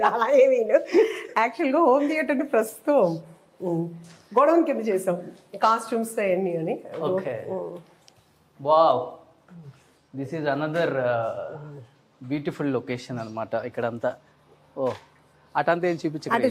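No technical faults can be heard anywhere in the audio. Nothing in the signal calls for comment.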